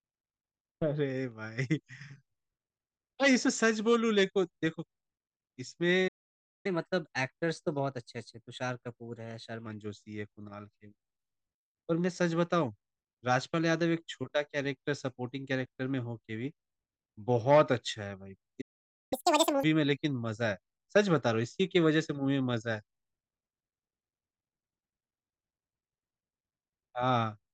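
At 6.07 s the speech cuts out for about 0.57 s, a playback stall, most likely the player running short of buffered data. It resumes at 6.66 s, and for the next three seconds, to 9.66 s, the player catches up at higher speed by resampling its backlog 1.1 times faster. Delivery is slightly hurried and pitch sits about a semitone and a half high before settling back. A second stall at 18.61 s silences the audio for about 0.50 s. Recovery at 19.13 s is much more abrupt: half a second at double speed, with pitch jumping close to an octave, giving a brief chipmunk-like burst until 19.63 s.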